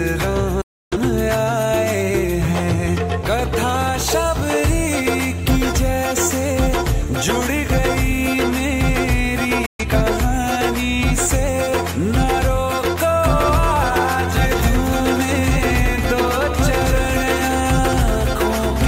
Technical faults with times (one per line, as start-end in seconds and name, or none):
0.61-0.97 digital broadcast dropout
9.66-9.85 digital broadcast dropout
13.23-18.87 doubled audio track